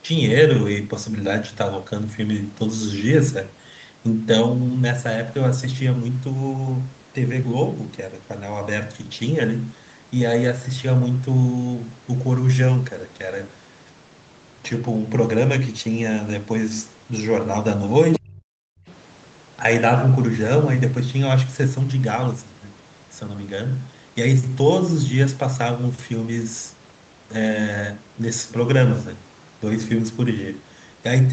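Right around 18.13 to 18.19 s there's a short scrap of a second voice, the other side's voice leaking through, sitting only about 10 dB under the speech. It's most likely loudspeaker playback that the echo canceller didn't fully scrub from the mic, so a fragment of the far end rides along with the near talker for a moment.

Overlapping that, from 18.17 to 18.5 s, you get speech suppressed in double talk. The talker's own voice sags hard, at worst by something like 40 dB, for roughly 300 ms. The likely story is both ends talking at once: the canceller couldn't tell its own talker from the echo and pulled everything down, so the voice dips.

At 18.78 to 18.87 s the room sound drops out for about 100 ms, down about 25 dB. That's background gated by the echo canceller: with the loudspeaker active it clamped the mic, the ambience vanished, and it came back when the canceller let go.

Then at 18.89 to 18.94 s the other side's voice leaking through turns up again, much fainter this time, roughly 30 dB under the speech. 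It's a brief, faint trace, again most likely residual echo slipping past the canceller. Throughout, the audio tops out at 8 kHz, which fits an Opus call path running at around 32 kbps.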